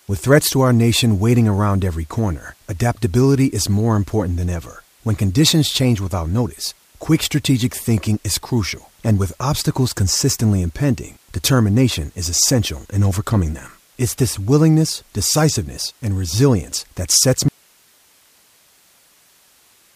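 At 17.48 s, right after "and resilience that sets", the speech cuts out abruptly and only hiss remains, around 35 dB below the speech, through to the end. This audio dropout to a faint residue likely comes from losing the signal while the path stayed live.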